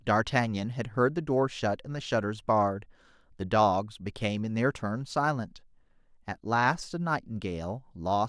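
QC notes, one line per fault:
No faults found on the speech track.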